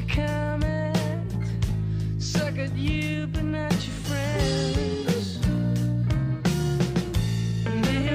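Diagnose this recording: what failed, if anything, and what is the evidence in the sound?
Nothing in the recording points to a failure at any stage of the chain. There is no audible event here that calls for a diagnosis.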